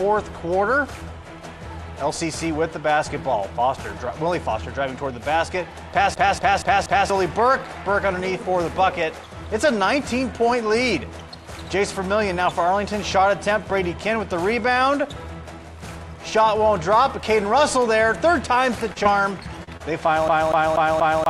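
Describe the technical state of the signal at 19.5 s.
Just before 19.5 s, from 19.43 to 19.47 s, there is a short concealed packet loss. About 20 ms of audio never arrived in time, and the decoder covered the gap with roughly 25 ms of extrapolated signal before blending back into the real audio, leaving a brief smear or wobble.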